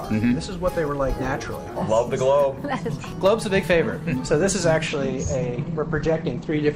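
The audio suffers a call bitrate drop from 4.88 s to the end at 6.76 s. The encoder, starved of bits, codes coarsely, so the sound turns rough and muffled, which fits a fall from about 96 to 13 kbps. On a spectrogram, content above 8 kHz vanishes abruptly, leaving a flat ceiling at 8 kHz.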